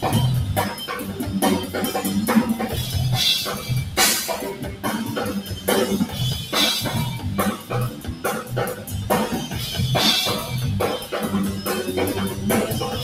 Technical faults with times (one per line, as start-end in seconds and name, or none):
0.00-13.04 noise suppressor applied to music or sounds
4.53-4.85 sound cut by the noise suppressor
5.39-5.68 sound cut by the noise suppressor
7.56-8.24 sound cut by the noise suppressor
8.74-8.93 sound cut by the noise suppressor